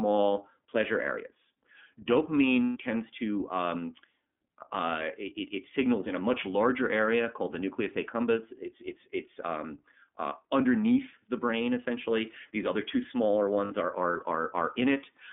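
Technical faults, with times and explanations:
throughout: iLBC codec. The speech sounds narrow and telephone-like, slightly rough and synthetic, with plainly audible coding damage. Nothing outside roughly 200 Hz to 3.5 kHz survives, and each 30 ms frame's excitation is coded on its own, which fits a low-bitrate narrowband VoIP codec near 13 kbps.
2.64 to 2.77 s: lost iLBC frames. Just before "tends to um", the sound turns into a held, buzzy, breathy tone for 120 ms. The decoder filled the gap of missing packets, about four frames, by repeating the last pitch cycle mixed with noise, then recovered immediately because frames stand alone.
13.65 to 13.72 s: lost iLBC frames. Between "other two smaller" and "are are", a brief 60 ms buzzy hold replaces the audio. Packets covering about two frames went missing, the decoder repeated the last pitch period with added noise, and the voice returned at the next frame.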